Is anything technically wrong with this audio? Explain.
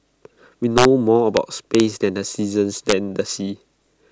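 Yes. This speech has integer overflow at 0.78–0.85 s, 1.37 s, 1.75–1.80 s and 2.90–2.92 s. Loud peaks, up to about 3 dB beyond full scale, wrap to the opposite sign instead of being limited, so the waveform jumps across its full range and produces violent cracks far harsher than clipping.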